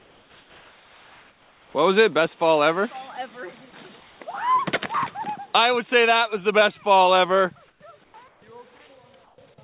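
Comfort noise in place of the background shows up in six gaps in this narrowband call audio, where nothing is heard above 4 kHz: 0 to 1.74 s, 4.0 to 4.2 s, 7.68 to 7.8 s, 8.04 to 8.14 s, 8.28 to 8.42 s and 9.24 to 9.38 s. In each, the real room tone gives way to a flat, featureless hiss, about 2 to 7 dB quieter, likely because the sender's discontinuous transmission cut out and the receiver filled in synthetic noise.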